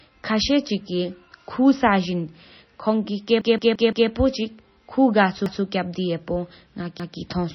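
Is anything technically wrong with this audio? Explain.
Yes, there are two faults.

Throughout the speech the sound is watery and swirly, with sibilants turning metallic and nothing above 6 kHz. This is likely heavy MP3 compression at a low bitrate, around 24 kbps. Short of bits, the encoder cut the treble and let weak frequency lines flicker on and off.

There is also a repeated buffer. From 3.41 to 4.10 s a 171 ms fragment stutters, playing four extra times with hard joins. Single repeats follow at 5.46 to 5.63 s and 7.00 to 7.17 s. Fresh audio arrived late, so the device replayed its last block, which fits an 8192-sample buffer.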